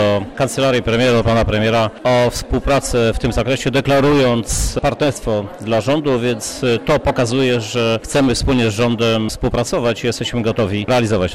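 From start to finish the audio is dull and carries a gurgling, granular roughness, with upper frequencies flickering in and out rather than staying steady. The likely cause is MP2 compression at a low bitrate, which fits something around 80 kbps. With so few bits, the MPEG Layer II encoder shuts off whole high sub-bands frame by frame and quantises the remaining bands coarsely, producing that unstable top end and grainy texture.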